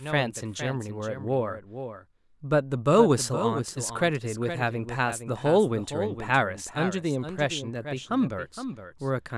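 A doubled audio track runs throughout: a second, somewhat quieter copy trails about half a second behind, likely captured again through a slower path.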